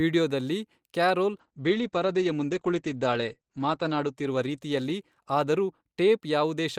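From 1.34 s to 6.35 s the speech suffers a call bitrate drop: the encoder's budget falls from 48 kbps to 12 kbps, holding at the lowest rate for about 2.45 s. With so few bits, Opus codes coarsely and narrows its bandwidth from 20 kHz to 8 kHz, so the sound turns muffled and rough, watery. On a spectrogram the energy above 8 kHz vanishes, leaving a flat ceiling, and returns when the bitrate recovers.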